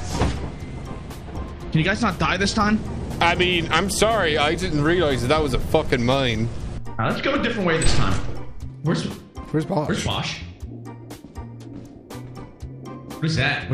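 No technical faults can be heard anywhere in the recording. Nothing breaks up, drops out or shifts in level at any point.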